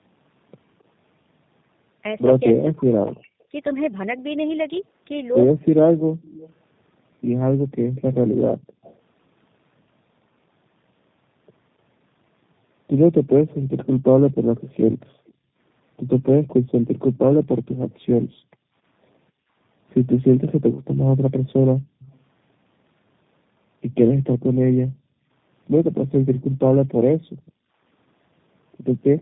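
From start to finish the speech shows tandem speech coding. It sounds like an AMR-NB narrowband coder followed by a low-rate G.729A-type coder, the second re-encoding the first's degraded output. The result is rough, muffled and warbly, with nothing above 3.8 kHz.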